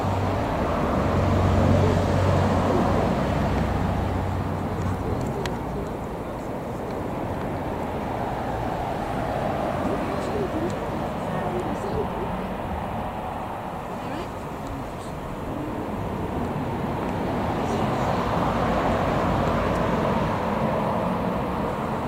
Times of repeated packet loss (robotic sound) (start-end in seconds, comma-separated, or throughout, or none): none